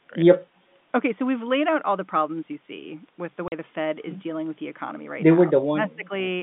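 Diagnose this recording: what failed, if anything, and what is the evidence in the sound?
Call processing is where the level drops come from. From 0.0 to 0.13 s the speech dips by around 15 dB for a brief stretch, and from 5.45 to 6.11 s it sinks much deeper, roughly 30 dB, for about half a second in total. This is likely speech suppressed in double talk: the echo canceller could not separate this side's talker from the far side's loudspeaker echo and turned both down.

The network stage accounts for the hole at 3.48 to 3.52 s. That is packet loss filled with silence: 40 ms of dead air with abrupt edges, which fits two lost 20 ms packets. The receiver inserted silence instead of concealing the gap. It differs from the suppression dips in being total silence, with hard boundaries at packet length, rather than a shaded gain reduction. The G.711 telephone coding carries the 150 Hz to 3.6 kHz band with no clear codec damage.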